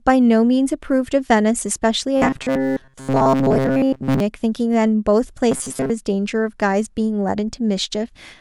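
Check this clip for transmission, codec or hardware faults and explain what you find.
Two stretches of robotic sound from repeated short buffers, 2.17 to 4.20 s and 5.52 to 5.91 s. Speech becomes a rigid 134 Hz buzz, likely from a roughly 7.5 ms buffer replayed over most of the skipped audio.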